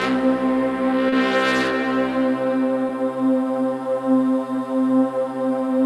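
A brief smear at 1.09 to 1.13 s and a brief wobble at 2.88 s are short concealed packet loss. About 30 ms and 10 ms of audio arrived too late, and the receiver patched the gaps by extending the preceding sound before blending back.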